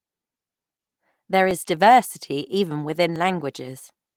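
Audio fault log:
1.51 s and 3.16 s, dropped buffer (overrun): each is a small forward jump, just before "diversity even" and just after "diversity even". Roughly 10 ms of audio is missing, likely because the input was not read before being overwritten. The waveform shows an abrupt step discontinuity, and the spectrogram a thin full-height vertical line, standing out against the light Opus coding.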